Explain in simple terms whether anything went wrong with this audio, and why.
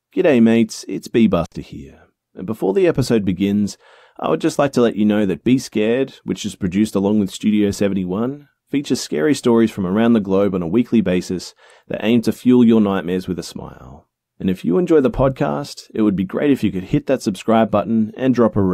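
Right near the start of the speech, at about 1.45 seconds, the sound suddenly drops out for a split second, roughly 60 milliseconds, with a crackle as it cuts and again as it returns at 1.53 seconds. This is an intermittent contact: a loose cable or plug briefly lost its connection, so the signal stopped getting through until the contact closed again, leaving faint hiss in the gap.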